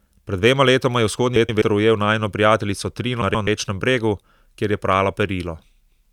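Frames out of order at 1.36–1.62 s, after "dvema letoma je", and 3.22–3.48 s, after "ujel najino prijateljico": swapped 128 ms halves flutter, showing as three abrupt spectrogram seams.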